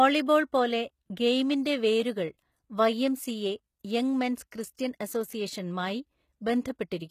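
Throughout the speech the treble sounds synthetic. S sounds come out gritty and metallic, and the energy stops dead at 14.9 kHz. The likely cause is HE-AAC compression at a rate that fits roughly 20 kbps. Spectral band replication rebuilds the upper band from copied lower bands, so its harmonics don't line up with the coded part. A plain low-pass would just sound dull. Here the top stays bright but false.

At 4.51 s, just after "യംഗ് മെൻസ്", there is pre-echo. A brief hiss of about 11 ms runs ahead of an attack and softens it. The codec spread quantisation noise sized for the loud onset across its whole block, including the quiet moment before it. Unlike a click, it is noise rather than a single tick, and unlike reverb it comes before the sound instead of trailing after it.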